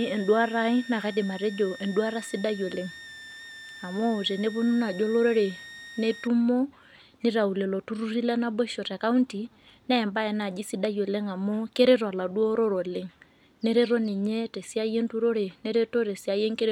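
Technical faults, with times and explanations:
0.00–6.27 s, switching supply whistle: a high whistle drifting between 1.78 and 1.86 kHz, about 20 dB below the speech, from a power supply switching in an audible burst mode or beating with another supply.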